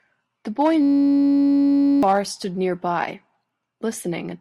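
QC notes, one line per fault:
0.82–2.03 s, system hang loop: one 10.67 ms slice cycles nonstop as a steady 93.8 Hz buzz, which fits a 512-sample buffer. About a second of audio is lost.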